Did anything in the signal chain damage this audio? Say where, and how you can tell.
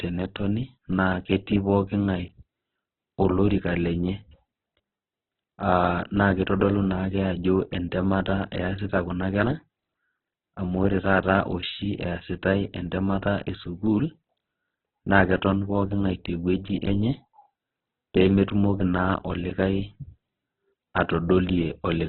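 Yes. The codec stage did the most damage. The whole clip is narrowband, with nothing above about 4 kHz. The speech sounds rough and grainy, and the missing detail is filled with noise rather than left as holes. That points to Opus compression in its music (CELT) mode. The encoder spreads band energy with noise when bits are short. The heavy damage fits a very low bitrate, around 8 kbps. That is the likely cause.

The driver or buffer stage adds a repeated buffer twice, at 16.86 s and 19.50 s. Each is a brief click or buzz, not a stutter. The same tiny slice plays three times, with a hard join at every repeat. The slice length fits a 128-sample buffer of about 2.7 ms. New audio came late, so the device replayed its last buffer, and roughly 5 ms of real audio was lost each time.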